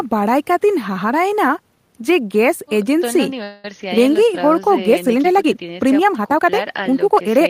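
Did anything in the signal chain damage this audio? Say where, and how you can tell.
Yes. From 3.43 to 3.65 s the speech stalls into a fading buzz or hiss for about 0.21 s, then resumes exactly where it stopped, with nothing lost but everything after running 207 ms later. This is a call audio freeze, likely from network packets delayed until the jitter buffer emptied.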